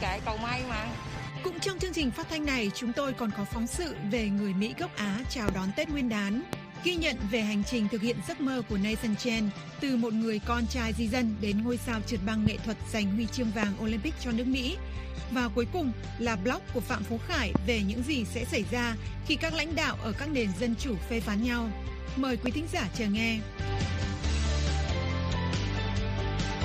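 Loud pops at 5.49, 6.53, 12.46, 13.63, 17.55 and 22.46 s: single 25 ms thumps roughly 20 dB above the sound (the last lower), likely electrical transients.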